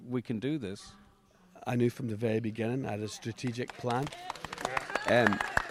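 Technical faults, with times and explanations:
4.03–4.25 s, loose connector crackle: a worn or dirty contact briefly makes and breaks, chopping the signal into an irregular scratchy burst for about 0.22 s. The waveform shows jagged dropouts, and the spectrogram shows scattered broadband vertical streaks.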